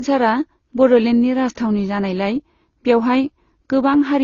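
Transcoding between lossy codecs is the likely cause across the whole speech clip. The sound points to a low-rate AAC-LC encode near 24 kbit/s, re-encoded as Opus near 32 kbit/s. Nothing remains above 7 kHz, and the AAC artefacts are heard together with Opus's own.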